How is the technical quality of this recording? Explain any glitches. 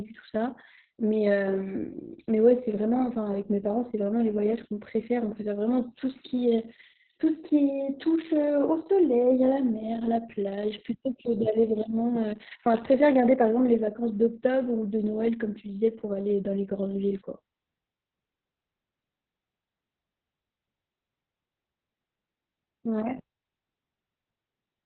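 The quality is poor throughout. The speech sounds muffled, hoarse and faintly robotic, with nothing above 4.3 kHz, which points to heavy Opus voice compression: low-bitrate narrowband SILK coding that strips the highs and coarsely approximates the vocal excitation.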